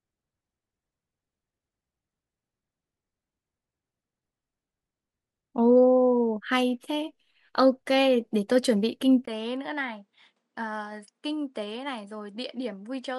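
Input switched, likely, to a poorer device at 9.25 s: a 20 ms gap, then sound cut off above 10.5 kHz and about 10 dB quieter.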